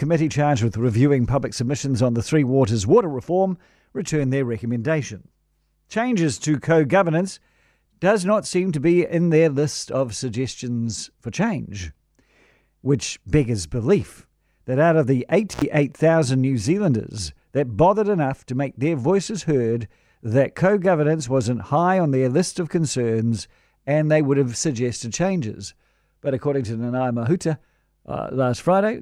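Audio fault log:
15.52 to 15.63 s, intermittent contact: just after "that out of the", the speech drops out for about 80 ms with crackle at both edges, as a loose connection briefly opens.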